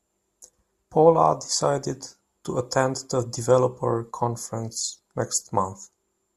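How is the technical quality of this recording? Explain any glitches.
The speech carries one glitch, near the start. From 0.32 to 0.40 s there is a brief jumbled moment, caused by chunks out of order: one 40 ms chunk arrived late and plays after the chunk that should follow it. Nothing is lost, but the swap leaves three hard joins.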